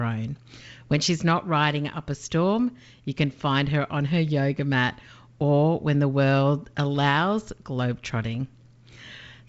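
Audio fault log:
No faults found; the speech runs over G.722 wideband telephone coding at 64 kbit/s, topping out near 7 kHz, with coding damage faint at most.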